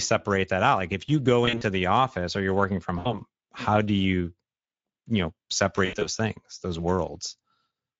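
Speech, carried throughout by the Speex codec with plainly audible damage: a hoarse, noisy texture and noise-like top band that fits a mid-quality setting near 17 kbps, steady rather than intermittent. VoIP packet loss concealed by the speech codec interrupts it three times: at 1.45–1.63 s after "if you go", at 2.99–3.21 s after "or you're working from", and at 5.85–6.08 s after "you know". Each is a stretched, fading sound with weak or distorted speech afterwards rather than a hard dropout or click, consistent with roughly 60–100 ms of lost packets.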